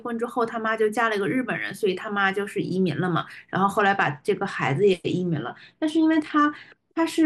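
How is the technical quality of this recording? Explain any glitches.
The recording has one clear glitch: a Bluetooth SBC bit pool drop from 3.76 to 6.90 s. The phone cut the encoder's bit budget, which fits a fall from a bit pool of about 31 to 13 (roughly 94 kbps). The top sub-bands were starved and the rest coarsely quantised, so the speech turns dull and gritty until recovery. The sound never drops out, and the treble loss comes with added grit, which sets it apart from packet loss or a simple low-pass filter.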